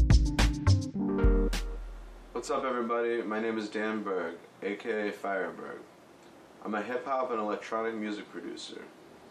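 Nothing stood out as a technical fault on listening.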